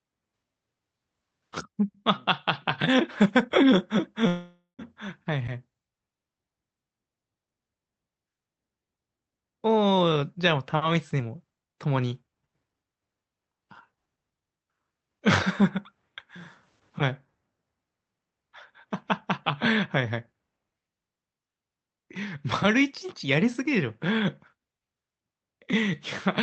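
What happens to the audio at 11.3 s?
At 11.3 s the speech is in a jitter buffer speed-up, 10.22 to 12.74 s. Holding excess buffered audio, the receiver repeatedly cuts pitch-period-length pieces, so it runs 19% fast and roughly half a second shorter. It sounds hurried at normal pitch, unlike a resampling speed change, which raises pitch.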